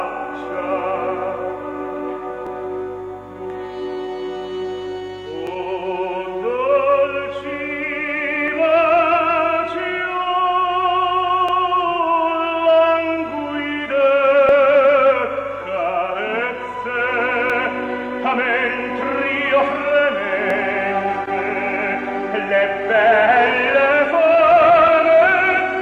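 Overlapping chunks produce a brief click or stutter at regular intervals, at 2.47, 5.47, 8.48, 11.49, 14.49, 17.50, 20.50 and 23.51 s. The audio was handled in blocks of about 3.0 s, and each block begins slightly before the previous one finished, so about 6.5 ms of sound is played twice at every join. That short repeat is what creates the evenly spaced ticks.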